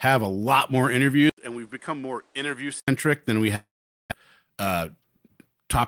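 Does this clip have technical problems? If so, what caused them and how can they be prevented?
Yes. At 1.30 s, after "a lot more", the sound goes quiet for 80 ms. It then returns duller, with nothing above 10.5 kHz, about 10 dB quieter, and with new background noise. It clears again at 2.88 s, before "than we". This is likely an input switched to a poorer device. Lock the recording to one microphone and disable automatic device or headset switching.

From 3.55 to 4.14 s, after "than we", a fading buzz replaces the audio, followed by 440 ms of silence. About 400 ms is never heard. This is likely a long network dropout. Use a stable wired connection, or give the call more bandwidth.

From 4.43 to 5.69 s, the sound runs at 111% speed with unchanged pitch. This is a jitter buffer speed-up, where the receiver removed roughly 150 ms in small pieces to cut delay. Steadier network delay prevents the backlog that triggers it.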